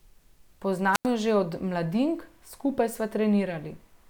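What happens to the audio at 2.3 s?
Nothing goes wrong at 2.3 s; the speech carries on intact through that moment.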